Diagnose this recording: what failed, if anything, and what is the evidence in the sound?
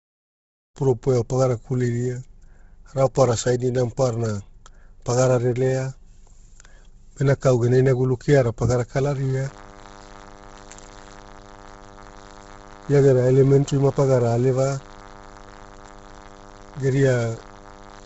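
At the codec stage, the speech was likely squeezed through Bluetooth LC3 compression at a low rate, consistent with about 16 kbps in 10 ms frames. Heavy damage: nothing survives above 7.7 kHz, and the upper band sounds grainy and breathy where noise fill replaces the real spectrum.

In the analogue wiring, a DECT cordless phone buzz breaks in at 9.09 s, right after "gena inagulu keara pagara", and runs to the end. The nearby DECT radio bursts every 10 ms get rectified by the audio circuit, giving a thin 100 Hz buzz with dense harmonics, about 25 dB below the speech.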